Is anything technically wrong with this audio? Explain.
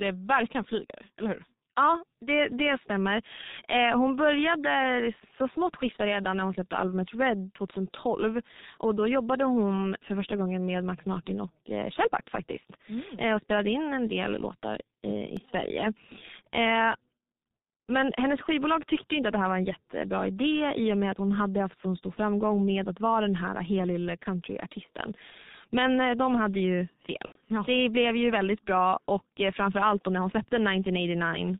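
Yes, there are three problems. The whole clip has been through the G.723.1 codec, and it's heavily damaged. That low-rate telephony coder throws away everything above 4 kHz and updates its voice model slowly, so the speech comes out muffled and hoarse with smeared consonants, which fits the 6.3 kbit/s mode.

At 15.37 s there's a block of digital silence, a gap of under a millisecond where the sound drops out and comes back with no fade. Most likely something didn't fill the output buffer in time, and the hard edges give you a small tick.

Right after "eh de hade ju", from 27.26 to 27.40 s, you get VoIP packet loss concealed by the speech codec. About 90 ms went missing, which fits three 30 ms frames. The decoder kept extrapolating from its last pitch and filter while lowering the gain, so the sound is stretched and fades, then stays weak or distorted briefly after.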